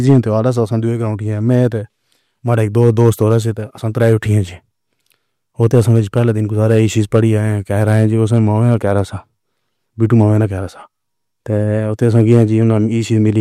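Hard clipping occurs seven times: 0.09–0.49 s, 2.53–3.37 s (ending just before "سے تو"), 4.01–4.12 s (just after "سے تو"), 5.63–7.20 s, 7.81–9.00 s, 10.03–10.23 s and 12.03–12.77 s. The speech peaks overran the available level by about 1 to 5 dB and were cut flat, giving a crackly, harsh edge. A waveform shows squared-off tops, and a spectrogram shows smeared high-frequency harmonics.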